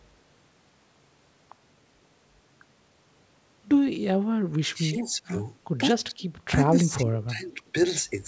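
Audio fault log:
4.74–5.33 s, 6.07–6.16 s, 6.81–7.74 s, speech suppressed in double talk: the speech dips by about 10, 15 and then 20 dB, deepest in the last stretch, likely because an echo canceller could not separate the near-end talker from the overlapping far-end echo and attenuated the near-end talker along with it.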